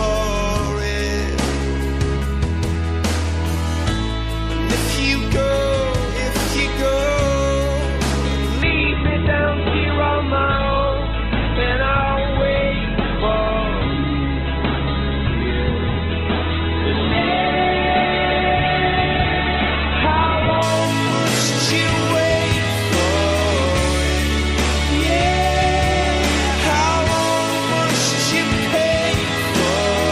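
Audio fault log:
8.62–20.62 s: adaptive stream at a lower bitrate. For 12 s the sound turns abruptly dull, with nothing above 4.2 kHz, then snaps back just as suddenly, with no gap at either edge. The player evidently dropped to a much lower-bitrate version of the stream when the connection slowed, which points to a very low speech-grade codec setting. On a spectrogram the upper band vanishes in a sharp-edged block; the waveform stays continuous throughout.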